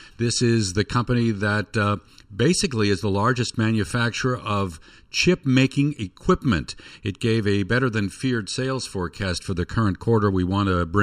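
Channel delay (comb filtering) runs through the whole speech clip. One channel arrives a fraction of a millisecond late, and the two are then summed to mono. Energy common to both cancels at evenly spaced frequencies. The first notch sits somewhere around 700 Hz, with further notches repeating higher up. The result is a hollow, phasey tone that never changes. The speech sounds tubular from start to finish.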